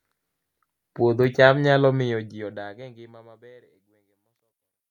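No faults found in this speech; the level simply eases down from around the two-second mark to the end in a smooth, deliberate fade-out.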